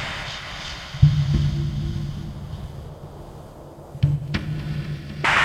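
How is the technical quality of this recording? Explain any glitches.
The technical quality of the recording is sound, with no glitches to explain.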